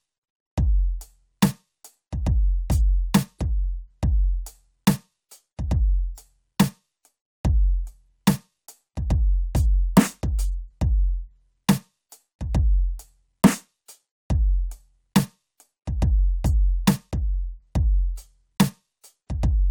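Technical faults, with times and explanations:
Nothing technical stands out here; the music just runs along with no faults to report.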